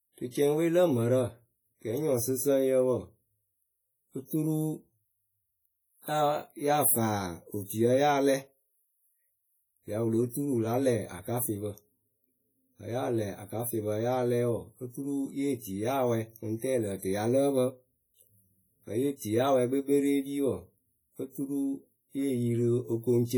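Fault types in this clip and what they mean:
WMA compression: Throughout the speech, the sound rings and smears, with a washy hiss that swells and fades with the level. That points to a transform codec working in long blocks. Its quantisation noise spreads over tens of milliseconds around each sound, and weak detail is dropped entirely. The damage is heavy, which fits a low bitrate near 32 kbps. The likely cause is a simple early WMA encoder. Content still reaches up to 20.1 kHz.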